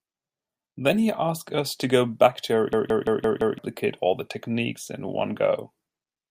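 From 2.73 s to 3.58 s the speech stops and a system hang loop takes over: the computer or driver stalled while the audio hardware kept replaying the same ring buffer. A 171 ms piece of audio repeats exactly five times at 5.86 Hz, which fits an 8192-sample buffer. With a segment that long, it comes across as a rhythmic machine-gun stutter, and about a second of the real speech is missing when playback resumes.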